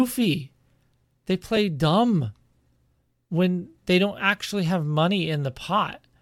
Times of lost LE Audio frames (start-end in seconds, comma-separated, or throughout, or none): 1.56